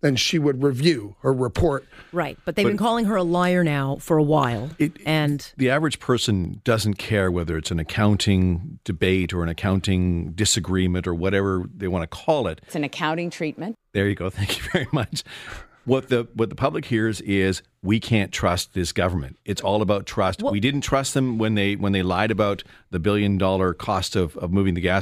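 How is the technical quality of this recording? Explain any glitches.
The speech recording has two glitches, both of the same kind.

Block of digital silence, at 6.45 s (after "it and the average", before "doesn't care whether it's") and at 9.24 s (after "whether it's an accounting", before "or an accounting disagreement"). Each time, a short stretch of output was filled with zeros instead of audio, probably because the buffer wasn't supplied in time. The gaps last 0.73 ms, which fits a 32-sample block, and 0.57 ms. Because the sound cuts out and returns abruptly, each is heard as a tick or dip rather than a gap.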